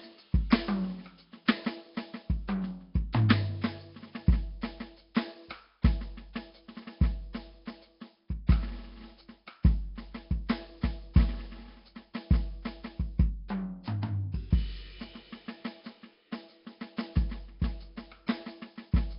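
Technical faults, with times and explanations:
Throughout, Nellymoser compression: the music sounds rough, hissy and smeared, likely from Nellymoser Asao near 22 kbps. A spectrogram shows noise-filled bands and nothing above 5.3 kHz.
0.50, 3.13, 5.15 and 18.27 s, pre-echo: a 17 to 19 ms hiss comes just before each sharp attack. The coder spreads its quantisation noise across the whole block, so the noise fills the quiet moment before the attack. This shows as smears leading each transient on waveform and spectrogram.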